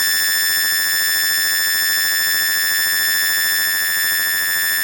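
Throughout the music, a planar-read-as-interleaved fault is audible. Each 10.88 ms block holds its left samples then its right, but is read as alternating pairs. Every block plays twice at double speed. Blocks this short give a robotic buzz near 91.9 Hz, not an octave jump.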